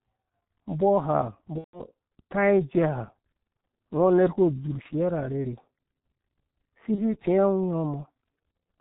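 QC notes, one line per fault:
throughout: G.723.1 codec. The speech is dull and hoarse. Nothing survives above 4 kHz, and consonants smear into one another. The heavy damage points to the low-rate G.723.1 mode near 6.3 kbit/s, which codes the voice in 30 ms frames and updates its vocal model slowly, so fast changes blur. Ordinary band-limiting would only muffle the sound. Here the hoarse, granular texture also comes from the model itself.
1.58–1.82 s, 4.82–4.88 s (between "uku udzurh" and "ra arherhe"), 6.96–7.20 s: VoIP packet loss concealed by the speech codec. At each point the sound is stretched into a fading buzz or coloured noise as the decoder repeats its last pitch and filter at falling gain. The first gap fits about 150 ms of missing audio, roughly five frames. The other two fit a single 30 ms frame, yet the disturbance at 6.96 s lasts about 0.25 s because recovery builds frame by frame. 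Unlike a plain dropout, the sound does not cut off at once but stretches and dies away, and in the five-frame first gap it goes silent from the third lost frame.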